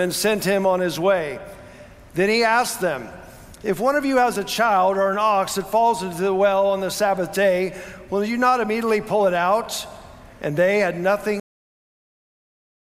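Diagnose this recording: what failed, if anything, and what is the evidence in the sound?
The failure is a cut-off end at the buffer and storage stage. At 11.40 s the sound stops abruptly, in the middle of what was playing. It falls straight to digital silence, with no decay or fade. That silence fills the remaining 1.4 s. The final buffers were never written to the file or handed to playback. Their samples simply do not exist, so the audio ends mid-sound instead of finishing naturally.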